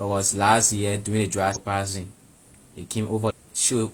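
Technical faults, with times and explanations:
1.52–1.57 s and 3.26–3.32 s, damaged data in a compressed stream: corrupted bytes make the decoder misread frames and lose sync, producing brief glitches in the speech.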